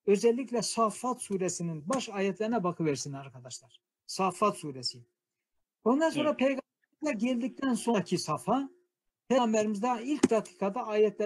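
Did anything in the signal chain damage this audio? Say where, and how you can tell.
Yes. The damage is at the codec stage, where compressed frames were skipped at 7.93 s and 9.37 s. At each point the audio jumps forward. Roughly a tenth of a second is lost at the first and about 150 ms at the second, which points to runs of around five and seven frames that were missing or rejected by the decoder.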